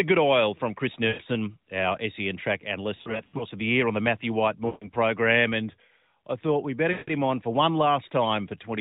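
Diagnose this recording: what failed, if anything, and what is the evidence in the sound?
Radio errors on the network leg corrupted AMR speech frames. The decoder concealed these lost AMR speech frames by reusing the last good pitch and vocal tract settings at falling gain. The speech smears and fades at 1.08–1.22 s, 2.96–3.44 s (scattered dropouts), 4.66–4.88 s and 6.92–7.14 s.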